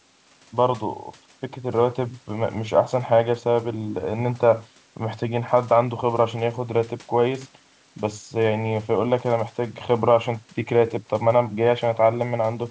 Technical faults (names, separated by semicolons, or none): none